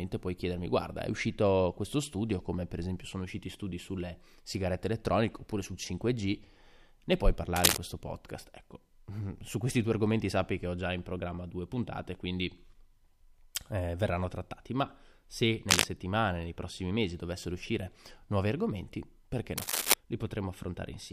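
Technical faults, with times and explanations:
7.56–7.78 s, 15.69–15.85 s and 19.57–19.94 s, cable scratch noise: rough, uneven rustling sits over the speech, slightly louder than it, after "ne puoi", between "verranno trattati ma se" and "nei prossimi mesi dovessero", and after "uscire nuovi argomenti perché". The likely cause is a worn connector or cable shifting, its contact resistance jumping rapidly. Unlike isolated clicks or a digital dropout, each event is a dense, irregular burst lasting a fraction of a second, and the speech continues underneath.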